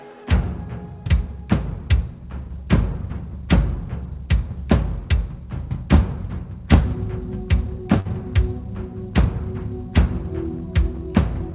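At 8.0 to 8.08 s there is a short stall from a late packet. The sound is held about 52 ms too long, then resumes where it left off, with nothing lost.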